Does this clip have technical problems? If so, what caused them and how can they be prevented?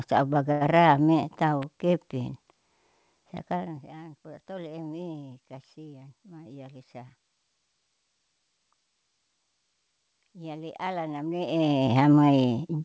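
Yes. From 0.52 to 0.63 s there is a short stall from a late packet: a packet arrived late, the jitter buffer emptied, and the receiver held the preceding sound for about 89 ms before resuming where it left off. Nothing is lost, but playback now runs 89 ms later. A larger or more adaptive jitter buffer and a steadier network path prevent this.

At 1.62 s a sharp, brief snap sits on top of the speech. This is likely an electrical switching spike, picked up by the audio line from a nearby switch, motor or static discharge. Shielded cabling, proper grounding and keeping switching equipment away from the signal path prevent it.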